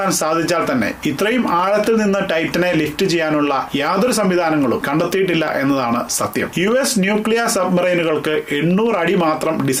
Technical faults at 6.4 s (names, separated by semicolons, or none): train of clicks